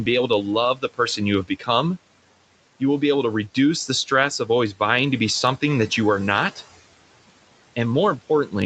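Noise suppressor artifacts run through the whole recording. The suppressor estimates the steady room noise and pulls those bands down by about 18 dB frame by frame, so the background drops away in the gaps and returns under the speech. On a spectrogram the noise floor looks lower between phrases. The waveform shows near-silent gaps that swell only when speech starts.

Speech cut by the noise suppressor occurs twice. From 0.75 to 0.99 s, after "be able to" and before "you have", the suppressor treats quiet speech energy as noise and cuts it by about 18 dB, so around 150 ms of the phrase sounds swallowed. From 1.44 to 1.69 s, after "you have", a similar drop of about 17 dB thins another stretch. On the spectrogram the speech energy dips in both places. The waveform envelope sags there.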